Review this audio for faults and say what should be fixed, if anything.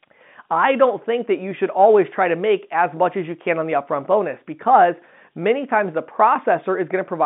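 Nothing needs fixing; no faults are present here.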